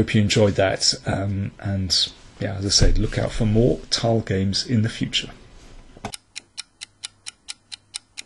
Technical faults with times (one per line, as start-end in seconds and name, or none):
none